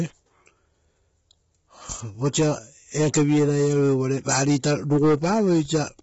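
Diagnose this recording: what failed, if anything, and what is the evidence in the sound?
The speech is rough and grainy throughout, with noise filling the gaps between harmonics and nothing above 7.7 kHz, which points to the codec stage, likely low-delay AAC compression. The bitrate sounds like about 16 kbps. A plain low-pass filter would cut the top band without the graininess.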